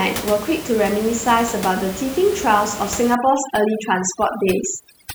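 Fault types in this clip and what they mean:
Overdone noise removal: From 3.15 s to the end, noise reduction is set too strong. Bands near the room noise, about 13 dB below the speech, drop almost to silence. Quiet speech detail vanishes too. Twinkling specks remain.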